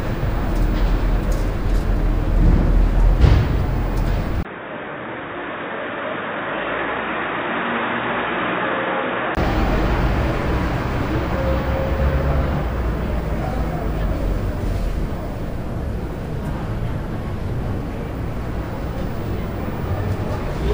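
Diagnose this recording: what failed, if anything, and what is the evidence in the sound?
From 4.43 s to 9.37 s the everyday sounds turn dull and boxy: nothing reaches above 3.8 kHz, the level drops by roughly 10 dB, and a faint new noise floor appears, far below the signal. A 20 ms silence opens at 4.43 s. Full bandwidth returns at 9.37 s. This points to the input switched to a poorer device, likely a different capture device chosen at the driver level. On a spectrogram this shows as a hard ceiling at 3.8 kHz for that span, with a thin gap at 4.43 s. The waveform envelope shrinks over the same stretch.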